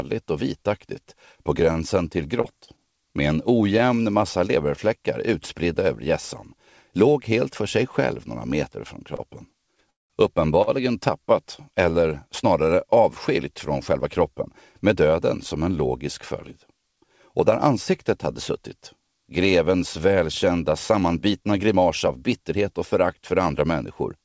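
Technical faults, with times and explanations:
1.04 to 3.82 s, scattered short gaps: about seven tiny holes, none over roughly 30 ms, patched by stretching the last sound, so you get brief ticks and smears.
9.16 to 10.70 s, repeated stalls (stutter): the buffer ran dry three times, the longest a 193 ms hold, so the audio drags and hiccups without losing anything.
13.93 to 14.95 s and 20.51 to 23.06 s, jitter buffer speed-up: the receiver trimmed pitch-period slices to catch up, running 4% then 8% fast at unchanged pitch, so the second run sounds hurried.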